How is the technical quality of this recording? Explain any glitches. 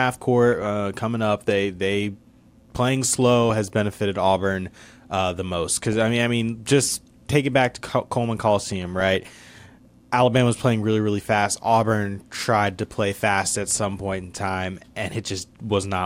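The speech has two short bursts of DAB burbling. The first runs from 5.84 to 5.96 s, between "uh the most" and "I mean I mean". The second runs from 8.66 to 9.16 s. Weak reception lets bit errors of around 0.3 percent slip past the error correction into the MP2 data. Corrupted samples put short blips of noise in individual sub-bands, and corrupted scale factors make sub-bands jump in level. On a spectrogram these appear as rectangular band-limited blocks flickering frame by frame. The lengths fit about five and about 22 frames.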